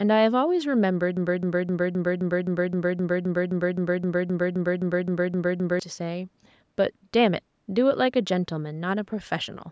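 At 1.17 s the speech catches and starts stuttering through a broken-record loop: the same 0.26 s fragment plays back to back, identically, 18 times, until it breaks free at 5.80 s. That's a little over four and a half seconds of the same chunk, and whatever should have been said in that stretch is simply gone. It most likely comes from the player or stream stalling and replaying the last buffer it held. The call-style band limit, with nothing above 8 kHz, carries through the loop unchanged.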